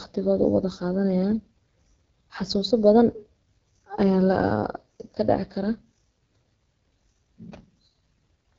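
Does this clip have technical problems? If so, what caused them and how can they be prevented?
Yes. The AMR wideband (HD Voice) codec at 8.85 kbit/s roughens the speech throughout, with a raspy texture and nothing above 7.5 kHz, unlike narrowband's dull 3.4 kHz ceiling. Encoding at 12.65 kbit/s or higher prevents this.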